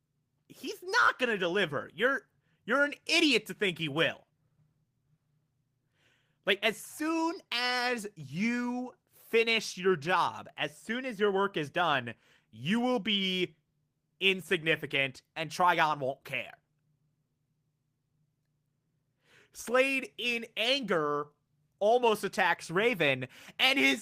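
No technical faults can be heard anywhere in this speech recording. Nothing interrupts or degrades the audio at any point.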